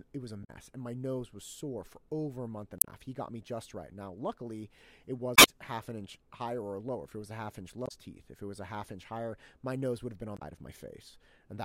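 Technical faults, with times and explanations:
0.41 to 10.42 s, damaged data in a compressed stream, five short bursts: 0.41–0.50 s (after "it was a", before "and my nose was"), 2.78–2.87 s (after "over a month and"), 5.34–5.49 s (after "luckily it", before "half an inch higher"), 7.85–7.92 s and 10.35–10.42 s. Each is a brief chirp, squawk, click or short hole. Corrupted bytes in the encoded speech make the decoder misread those frames and lose sync until it finds the next valid frame header.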